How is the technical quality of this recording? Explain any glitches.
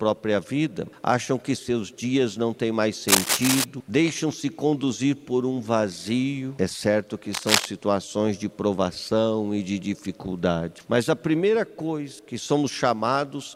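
Two bursts of cable scratch noise mar the recording, from 3.08 to 3.64 s and from 7.33 to 7.65 s. Each is a dense, ragged scratching roughly as loud as the sound itself, likely from a worn connector whose contact resistance jumped as it moved. Unlike evenly spaced clicks, it comes as irregular clustered rustling.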